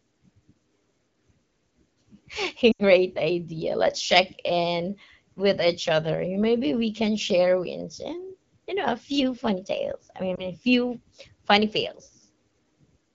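At 2.71 to 2.82 s and at 10.35 to 10.50 s, after "few funny tales I", lost AMR speech frames leave the wideband decoder repeating stale pitch and vocal tract settings at falling gain. The first, an 80 ms gap fitting four frames, drops to near silence within two frames. The second, fitting one frame, gives a brief warble before "few funny". On a spectrogram the harmonics stretch flat and dim, and on the waveform the envelope visibly sags.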